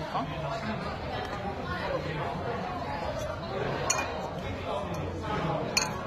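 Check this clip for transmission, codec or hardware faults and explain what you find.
One codec fault runs through the whole clip. Transcoding between lossy codecs, throughout: nothing above 14.6 kHz and two stacked layers of coding grain, likely HE-AAC later re-encoded as AAC-LC.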